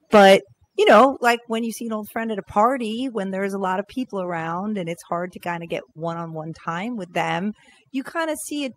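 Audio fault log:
Throughout: overdone noise removal. The background falls to near silence dotted with twinkling specks. A noise reduction stage set far too strong is pulling individual frequency bands down whenever they sit near its noise estimate, taking quieter speech detail with them.
0.13–0.35 s and 0.89–1.05 s: microphone overload. The loudest syllables gain a harsh, crackling edge, with the second burst ending just before "like when you see". Peaks run roughly 9 dB and 6 dB past the converter's limit, with around a sixth of samples flattened, likely from input gain set too high for the converter.
0.16 s and 1.17 s: microphone volume stepped down. Speech and background drop together in one sudden step, by about 2 dB and then about 7 dB, the second just before "like when you see". The second follows a distorted peak, likely the call software lowering the device's input volume after detecting clipping.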